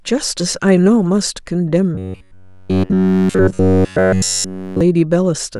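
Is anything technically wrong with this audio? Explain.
Yes. From 1.95 to 4.81 s, new audio likely arrived too seldom, so a short buffer of about 10.7 ms repeats throughout, producing robotic sound from repeated short buffers: a rigid 93.8 Hz metallic buzz.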